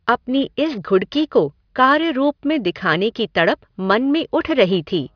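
Across the whole speech clip, sibilants sound gritty and metallic, and the spectrum stays dense right up to a hard ceiling near 5.5 kHz. This is aliasing. The sample rate was cut without an anti-alias filter, and the cutoff fits a drop from 44.1 kHz to 11 kHz. Energy above 5.5 kHz has folded back as unrelated frequencies, sitting roughly 30 dB below the speech.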